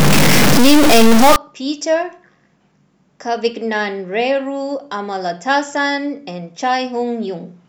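From the start to 1.36 s the speech carries a distortion, and the pauses fill with a gritty noise floor instead of falling silent. This is likely a stuck bit: one data bit held at a fixed value, knocking about half the samples off by that bit's weight. On a waveform, samples jump to fixed offset levels; a spectrogram shows broadband smear across all frequencies, filling the gaps between syllables.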